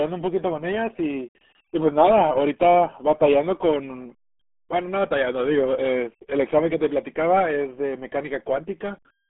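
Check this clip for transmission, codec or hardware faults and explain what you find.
One fault, present the whole way through: the speech has gone through the RealAudio 14.4 codec. Nothing survives above 3.5 kHz, and the heavy, gargly smearing fits an 8 kbit/s dial-up-era speech coder squeezing everything into a 200 Hz to 3.4 kHz band, leaving it muffled.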